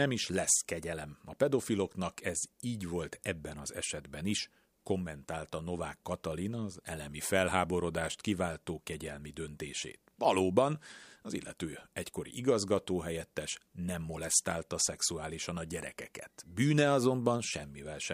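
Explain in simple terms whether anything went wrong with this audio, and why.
Nothing went wrong with this speech recording; no technical faults can be heard anywhere in it.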